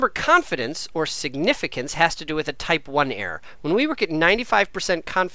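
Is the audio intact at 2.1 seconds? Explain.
Yes, the audio is intact at 2.1 seconds, with no dropout, click, distortion or other fault audible at that moment.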